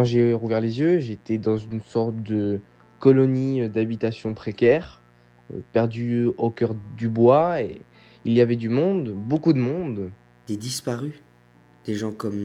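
A mains buzz runs from start to finish: a steady, raspy rasp sitting roughly 35 dB below the sound. Switching spikes from 60 Hz mains leak in twice per cycle, spraying harmonics of 60 Hz well up into the kilohertz range.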